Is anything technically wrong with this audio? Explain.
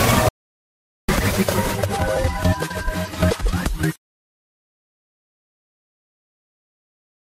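Yes. An audio dropout to silence runs from 0.29 to 1.09 s, removing about 0.8 s. The input was likely lost while recording continued writing silence, so sound cuts off mid-flow into dead silence. Unlike a natural pause or gating, no room tone remains.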